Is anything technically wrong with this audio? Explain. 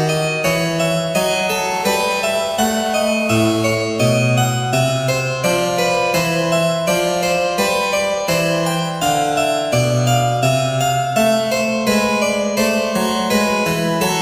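Yes. From 1.71 to 3.75 s there is GSM phone buzz: a nearby 2G handset on a call transmits in 217 Hz bursts, and the audio circuitry rectifies them. The result is a steady, harsh, harmonic-rich rasp about 17 dB below the signal.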